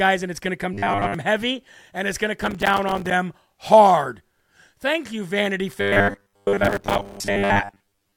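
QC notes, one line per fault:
0.74–1.15 s and 5.78–8.16 s, robotic sound from repeated short buffers: the speech turns into a rigid, metallic buzz at 100 Hz. It likely comes from a 10 ms stretch being replayed over and over while most of the real audio is skipped.
2.41–3.11 s and 6.65–7.17 s, processor overload crackle: gritty tearing rides on the speech. Dozens of missed deadlines leave short silent gaps with hard edges, which fits buffers of about 3 ms. The second burst falls inside the later robotic stretch.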